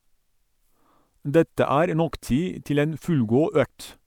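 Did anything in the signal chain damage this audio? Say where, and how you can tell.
No, nothing in the signal chain damaged this audio.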